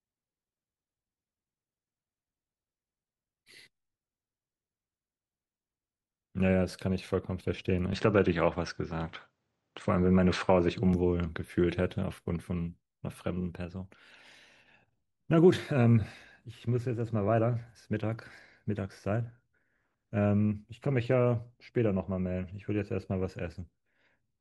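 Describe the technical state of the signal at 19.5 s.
At 19.5 s the speech signal is intact, with no audible technical fault at that moment.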